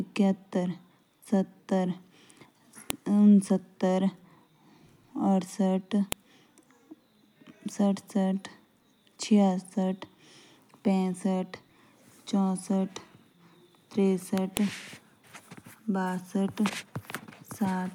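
A sharp, loud click snaps through the speech three times, at 2.90 s, 6.12 s and 14.57 s. That's a file header played as audio. The recording seems to have been stitched or streamed from separate WAV pieces without stripping their headers, so a few dozen bytes of header data get read as sample values. Each one lands as a brief, hard snap at the start of a new piece, whatever the speech happens to be doing at that moment.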